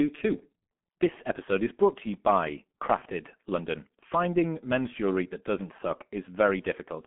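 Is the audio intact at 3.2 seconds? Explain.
No. At 3.2 s, as throughout, the speech carries G.723.1 codec damage: the low-rate coder, consistent with about 6.3 kbit/s, models the voice in coarse 30 ms frames. Nothing survives above 3.7 kHz, so it sounds muffled and hoarse, with smeared consonants.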